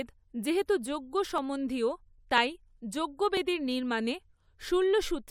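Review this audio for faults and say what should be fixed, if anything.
Overlap between stream segments: neighbouring segments, arriving about once a second, carry overlapping time stamps, so the player trims away roughly 20 ms of speech that was never duplicated. The waveform jumps at each seam, heard as a click or tiny skip at 1.38 s, 2.38 to 2.40 s and 3.37 s. To prevent it, align segment time stamps so each segment starts exactly where the previous one ends.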